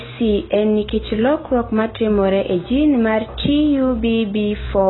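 From start to finish the speech is dull and smeared, with a warbling, fizzy texture on sibilants and held sounds. This is heavy AAC compression damage, likely from AAC-LC at a very low bitrate, which fits roughly 16 kbps. Nothing survives above 4 kHz, so a spectrogram shows a hard ceiling there, with patchy holes and blotchy noise-filled regions below it where the encoder dropped or substituted bands.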